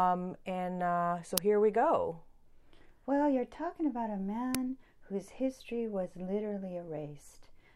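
Uninitialised buffer bursts hit this speech clip at 1.38 s, between "and uh so" and "here we go", and at 4.55 s, after "you're talking about a". Each is a 2.9 ms blast of loud digital noise, which fits a 128-sample block played out before any audio was written into it.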